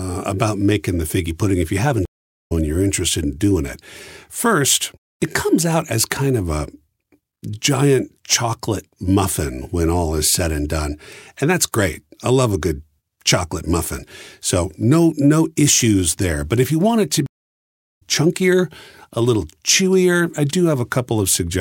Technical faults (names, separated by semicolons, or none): stream reconnect